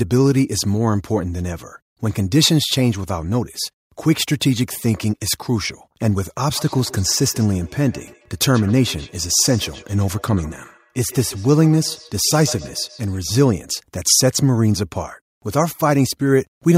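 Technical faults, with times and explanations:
6.56–13.24 s, feedback echo between two devices: the speech comes back as a faint repeat roughly every 150 ms, peaking about 21 dB below the speech. Two devices in the same room are on the call. One plays what the other's microphone sent, and that microphone captures it again. Each device's echo canceller removes only its own playback, so this copy slips through and returns after the loop delay.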